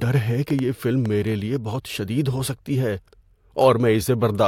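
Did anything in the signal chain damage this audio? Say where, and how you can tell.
Yes, there's a train of clicks from about 0.02 to 1.07 s: roughly four similar pops, unevenly spaced at close to three per second, peaking about 5 dB above the speech. Same-shaped pulses like that likely mean interference getting into the analogue wiring.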